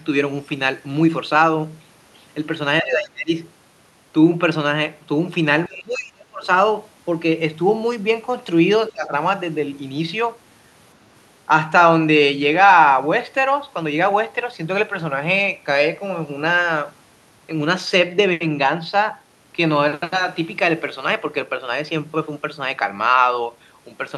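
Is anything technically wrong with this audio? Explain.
Yes. Speech suppressed in double talk occurs at 2.82–3.31 s, 5.67–6.48 s and 8.92–9.13 s. The speech drops by roughly 25, 30 and 15 dB. This is likely an echo canceller that confused it with loudspeaker echo during overlapping talk and turned it down.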